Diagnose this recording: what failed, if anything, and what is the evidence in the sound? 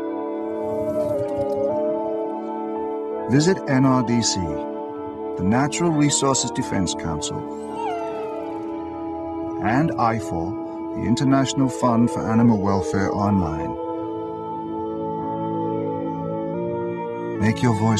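Four stretches of the audio play at the wrong rate: 1.15 to 1.70 s and 12.45 to 13.18 s run 6.35% slow and about 114 cents flat, while 6.10 to 6.63 s and 16.54 to 17.35 s run 6.35% fast and about 107 cents sharp. Each snaps back afterwards. This is likely a drift correction step at the driver or buffer stage, where clock-matching software abruptly resampled to drain or refill its buffer. Tape wow, by contrast, glides continuously, and pitch-only processing would leave timing unchanged.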